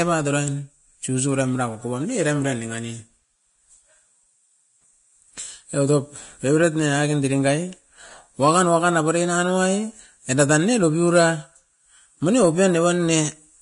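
Vorbis compression runs through the whole speech clip. Nothing is present above about 10.6 kHz, and the treble below that cut-off is plainly damaged, with a grainy hiss where fine detail should be, roughened tones and blurred attacks. This is the likely result of a low-quality Vorbis encode, which fits a bitrate around 33 kbps. At that rate the encoder keeps only a smooth spectral outline in the upper band and quantises the detail so coarsely that it turns into noise.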